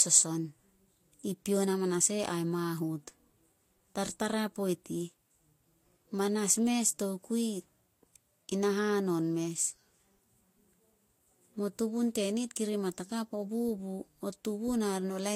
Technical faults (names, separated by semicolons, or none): transcoding between lossy codecs